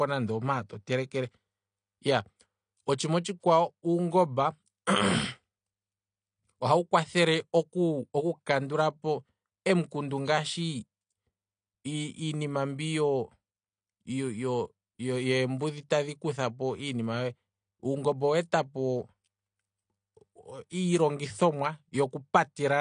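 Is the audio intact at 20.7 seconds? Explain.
No. At 20.70 s there is pre-echo: a brief hiss, spread over about 16 ms, that arrives just ahead of a sharp onset and blurs its edge. A transform codec spreads quantisation noise evenly across each block. When the attack lands late in that block, noise sized for the loud onset also fills the quiet stretch before it, where nothing masks it. The attack therefore sounds softened and smeared rather than crisp.

That moment also sits inside the AAC compression that runs through the whole clip, most likely AAC-LC at a low bitrate, around 32 kbps. Nothing reaches above 9.8 kHz, so the speech loses its top-end air and sibilance detail. The coding damage is plainly audible as a dull, smeared quality. At this rate the encoder quantises its frequency lines coarsely and cuts the high bands entirely to save bits, and that same coarse quantisation is what makes the pre-echo hiss exposed.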